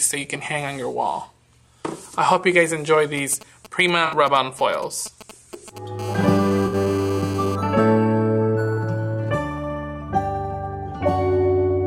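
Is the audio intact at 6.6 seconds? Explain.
No. A hard, raspy buzz at 217 Hz runs from 5.99 to 7.56 s, about 16 dB below the signal. This GSM phone buzz comes from a nearby 2G phone on a call whose radio bursts are rectified by the audio circuit. From 6.66 to 6.75 s the sound smears into a brief noisy, phasey patch. This is AAC frame loss with concealment: 64 ms went missing, which fits three lost frames, and the decoder filled the gap from the last good spectrum.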